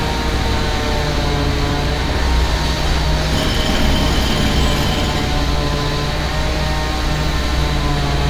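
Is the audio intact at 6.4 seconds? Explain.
Yes, the audio is intact at 6.4 seconds, with no dropout, click, distortion or other fault at that moment.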